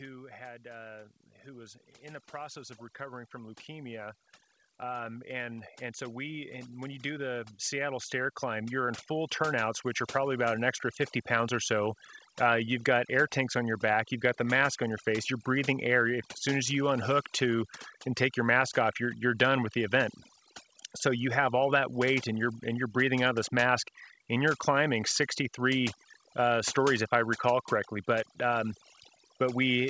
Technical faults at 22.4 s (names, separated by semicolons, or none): overdone noise removal